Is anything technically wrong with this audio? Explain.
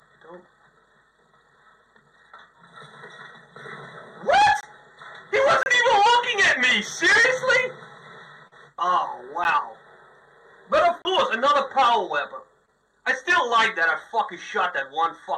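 Yes, there are two kinds of problem here, both short dropouts.

First, a block of digital silence shows up five times: 4.61 to 4.63 s (20 ms), 5.63 to 5.66 s (30 ms), a tiny one at 6.91 s (about 2 ms), 9.44 s (10 ms), and 11.02 to 11.05 s (30 ms). The output simply went to zero for that stretch, most plausibly because the buffer wasn't filled in time, and snapped straight back. The hard edges usually click, so the 2 ms one is just a tick while the 30 ms ones read as little holes.

Second, there's short concealed packet loss at 8.47 to 8.53 s, where about 40 ms never arrived, and at 12.65 to 12.70 s, about 20 ms. Here the receiver papered over the gap by stretching out the last bit of sound it had, then blending back into the real signal. So instead of a hard hole you get a brief smeared, wobbly patch.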